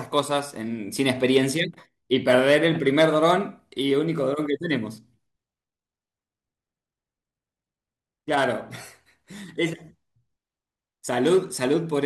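No technical faults are audible anywhere in this speech recording.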